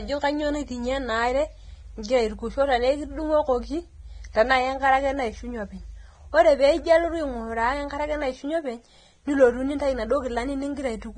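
From start to finish the speech has nothing above about 9.7 kHz, so it sounds dull and boxy, with the swirly, smeared texture of heavy lossy coding. This is a case of low-bitrate audio saved at a high bitrate: the file is likely a very low-rate encode, something around 22 kbit/s, re-saved as high-rate MP3, which keeps all that damage and the cut-off but can't bring back what was thrown away.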